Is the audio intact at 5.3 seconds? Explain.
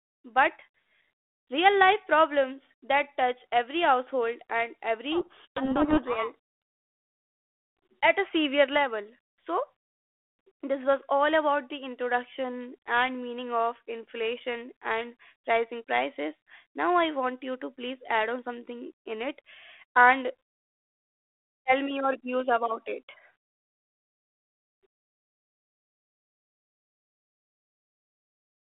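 No. From 5.12 to 6.35 s, just after "touch every household and", a codec payload misread occurs: the decoder unpacks the G.726 code words with their bits in the wrong order, so each sample decodes to the wrong step, and the speech is buried in harsh distortion until normal decoding resumes.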